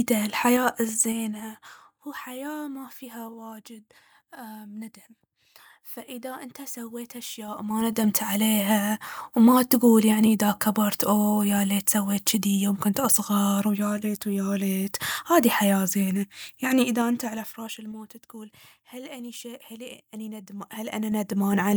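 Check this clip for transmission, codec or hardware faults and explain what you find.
The speech shows one fault, zipper noise, heard four times: 0.43 to 2.0 s, 7.42 to 8.05 s, 16.75 to 17.94 s, and 20.41 to 21.76 s. The gain moves in unsmoothed 3 dB jumps, a few to around ten per second, swinging the level down or up by about 15 to 20 dB. Each jump leaves a small click, so a ticking zipper rides on the speech while the level changes.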